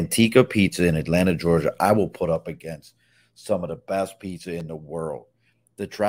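Speech, with a couple of technical problems. From 1.68 to 2.84 s there's zipper noise: the level drops by roughly 10 dB in 2 dB jumps at about five a second, with no smoothing, so each jump leaves a little click and you get a ticking zip riding on the voice. Then at 4.60 to 4.63 s there's a single loud pop, peaking around 5 dB above the speech. The speech carries on underneath. That sharp thump is likely from a plug, switch, static discharge or a driver glitch throwing a sudden voltage spike into the signal.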